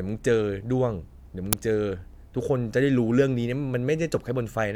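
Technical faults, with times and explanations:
1.53 s, uninitialised buffer: a single loud crack, only about 6 ms long, which fits one 256-sample block being played before any audio was written into it, so whatever was left in memory came out as samples. Unlike a dropout, which leaves silence, this is a brief, loud crack of garbage unrelated to the surrounding speech.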